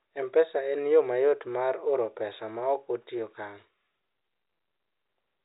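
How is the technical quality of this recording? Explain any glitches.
No glitches or technical faults can be heard here.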